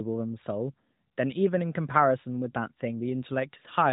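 No technical faults can be heard in this speech clip, which carries the narrowband sound of an AMR mobile call throughout.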